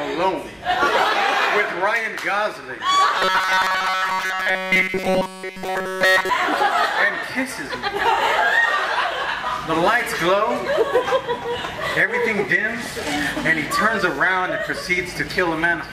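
New audio likely reached the player too seldom between 3.19 and 6.29 s, so it kept replaying a very short stretch of its last buffer instead of the real signal. The result is robotic sound from repeated short buffers: through essentially that whole span, the audio collapses into a rigid, metallic buzz at 188 Hz. That pitch fits a loop about 5.3 ms long, and because the fresh material is being skipped, the sound follows the original only roughly until playback recovers.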